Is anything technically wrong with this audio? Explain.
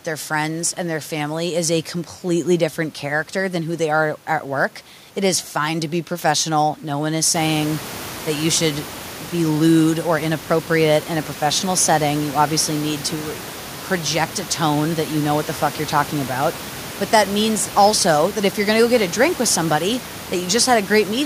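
No, nothing technically wrong can be heard in this speech recording. The background noise of the room rises by about 15 dB at around 7.5 s and stays about 16 dB below the speech, which is part of the recording environment rather than a fault.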